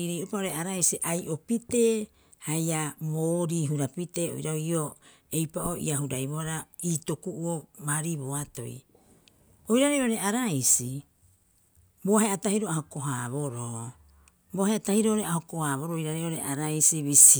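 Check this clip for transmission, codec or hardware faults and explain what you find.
Nothing in the speech here points to a transmission, codec or hardware problem; it all holds together without a hitch.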